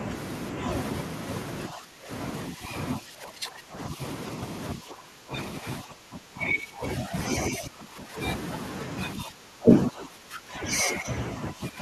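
Speech suppressed in double talk occurs at 1.69–2.1, 2.52–4.0, 4.75–7.14, 7.5–8.16 and 9.16–11.8 s. The speech sinks by around 15 dB or breaks into patches, likely because an echo canceller facing simultaneous talk turned down the near talker along with the echo.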